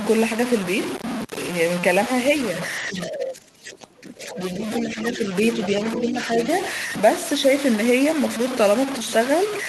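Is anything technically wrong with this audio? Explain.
Yes, there are three separate problems.

Low bit depth without dither runs through the whole clip. The speech sounds grainy and gritty, with distortion that rises and falls with the voice and sits only about 10 dB below it. That fits something like a 4-bit signal that was likely truncated with no dither.

Speech suppressed in double talk hits from 2.8 to 5.32 s and again from 5.69 to 6.48 s. The talker dips, by roughly 20 dB at worst in the first stretch and around 10 dB in the second. It's likely the echo canceller ducking everything while both sides talk at once.

The other side's voice leaking through shows up at 2.9–3.09, 3.76–4.0, 4.45–5.16 and 5.53–6.47 s. A second voice sneaks in underneath, loudest in the first scrap at about 10 dB down and faintest around 3.8 s. That's likely loudspeaker echo the canceller didn't fully remove.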